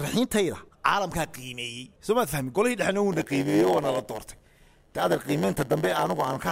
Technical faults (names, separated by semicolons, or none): block size mismatch (padded)